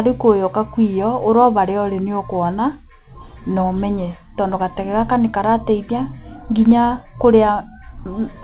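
No technical faults can be heard in this speech. It comes through a call path that cuts everything above about 4 kHz, giving the narrow telephone-band sound that fits a G.711 mu-law codec.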